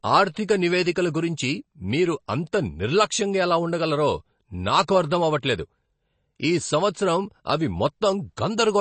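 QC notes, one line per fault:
throughout, MP3 compression: the speech has no content above 8.3 kHz and a watery, swirling quality, with s sounds turning metallic and consonant attacks smeared. This is likely low-bitrate MP3 encoding, which fits roughly 32 kbps: short of bits, the encoder cut the treble and dropped weak frequency lines that flicker on and off between frames. A simple low-pass filter would dull the top without this warbling, chirpy texture.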